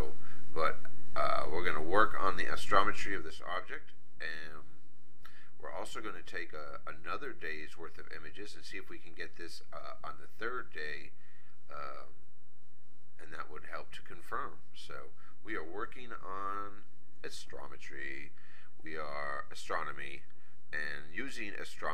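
From 3.00 to 3.40 s there is zipper noise: the level drops by roughly 10 dB, but in coarse unsmoothed steps, around fifty a second, rather than as a continuous ramp, so each jump puts a small click into the audio and the fade sounds like a fine ticking or zipping. On a waveform the envelope descends as a staircase. A spectrogram shows faint broadband vertical lines at each step.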